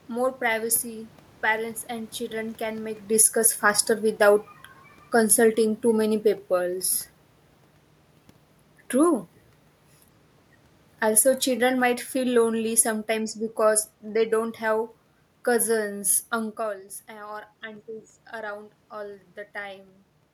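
A speech recording in which automatic gain falling starts at 3.04 s, just after "and children can make", and lowers level by about 4 dB until 6.85 s. A second fall runs from 11.02 to 16.61 s, about 6 dB, ending just before "eh or aunties around". On a waveform the envelope tapers steadily, and on a spectrogram the room noise dims along with the voice. Inside the first fall, automatic gain rising between 3.35 and 3.91 s briefly lifts voice and background together by about 4 dB, a short swell in the waveform across all frequencies. The talker's movement near 3.0 and 16.5 s changes only the voice's level, not the background's.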